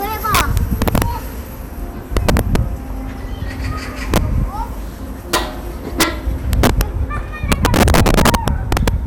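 A swirly, hollow smear runs through the whole clip, with blurred attacks and nothing above 17.9 kHz; this is likely generation loss from around seven MP2 passes, fitting 128 kbit/s.

Violent cracks, harsher than clipping, hit at 0.35–1.02 s, 2.17–2.56 s, 4.14–4.18 s, 5.34 s, 6.01–6.03 s, 6.53–6.81 s and 7.52–8.88 s. This is integer overflow: peaks driven about 3 to 9 dB past full scale wrap to the opposite sign.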